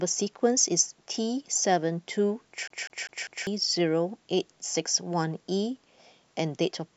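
Speech clip with a CD stuck on one turn from 2.68 to 3.47 s: a 0.2 s fragment repeats four times with muted jumps, evenly spaced unlike irregular network dropouts.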